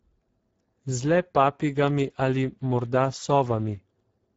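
From start to finish the speech carries plainly audible Speex codec damage: a hoarse, noisy roughness from starved CELP excitation, which suggests a bitrate near 10 kbps. Nothing sounds above 7.7 kHz. The grainy buzz, not swirly metallic warbling, separates it from transform codecs.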